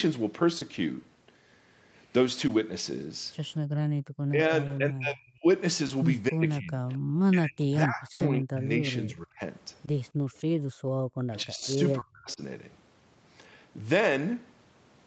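Right at the start, around 0.59 s, you get a short concealed packet loss: about 20 ms of audio never arrived in time, so the decoder stretched the last bit of speech to cover it and then blended back in. It's just a tiny smear or wobble. The same thing happens at 2.47, 4.67, 5.87, 9.85 and 11.99 s, each one a brief wobble where a short consonant can get swallowed.

From 3.64 to 4.03 s the background gets gated by the echo canceller. The far side was playing through the loudspeaker, so the canceller clamped the mic down hard, about 40 dB at its deepest. The room tone basically disappears for a moment and then comes back once the canceller relaxes. It does it again, for longer, from 10.12 to 10.99 s.

Then there are stretches of speech suppressed in double talk, at 4.31 to 5.46, 6.29 to 6.86, 7.31 to 9.40 and 11.27 to 12.41 s. The talker's level dips and chops, dropping by around 30 dB at worst, and about 35 dB in the last stretch. 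The likely cause is both ends talking at once: the canceller couldn't tell the local voice from the speaker echo, so it turned everything down and the speech breaks up in pieces.

Inside that third stretch, at 8.13 to 8.21 s, there's a burst of packet loss. About 60 ms went missing in one go, and the concealment carried the last sound forward while fading it. So you hear a held buzz or fading hiss, and then the speech picks up a bit further along with that chunk gone.

Last, there's an echo leak from 11.39 to 11.67 s and again briefly at 12.30 to 12.34 s. You can hear a faint copy of the speech trailing by about 259 ms, sitting around 30 dB under the main voice. Likely the far end's canceller didn't fully remove what its mic picked up from its loudspeaker, so a bit got sent back down the line. All of this rides on the Opus call path, which tops out at 8 kHz.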